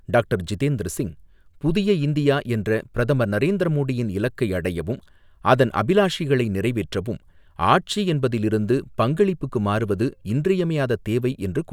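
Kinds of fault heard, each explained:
No faults can be heard in this recording.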